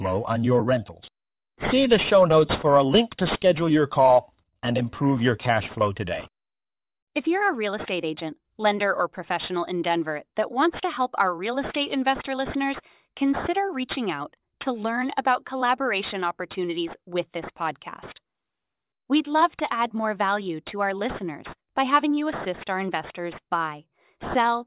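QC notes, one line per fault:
throughout: aliasing. Sibilants come out gritty and metallic, with false tones at pitches unrelated to the speech. Energy runs hard up to a sharp edge at 4 kHz, which fits a drop to an 8 kHz rate with no anti-alias filter. Content above 4 kHz folds back below it, sitting roughly 15 dB under the speech. A properly filtered band limit would only sound dull; here the added rough energy near the edge gives it away.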